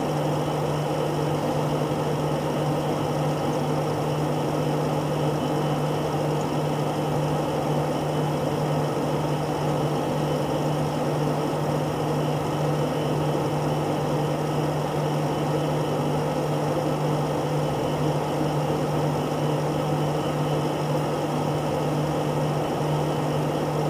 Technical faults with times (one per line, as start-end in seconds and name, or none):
none